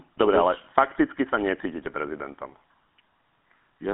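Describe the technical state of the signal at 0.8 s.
At 0.8 s the speech carries GSM full-rate codec damage, present across the whole clip. The codec rebuilds the voice from a vocal-tract model excited by sparse regular pulses, giving a plainly audible buzzy, gravelly roughness, with the band held to about 200 Hz–3.4 kHz and nothing above 3.8 kHz.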